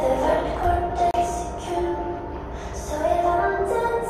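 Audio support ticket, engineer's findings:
Block of digital silence at 1.11 s, 30 ms long. Sound drops straight to silence and back, no fade, with a short hole between. Probable component: audio output path, buffer not filled in time, samples zeroed.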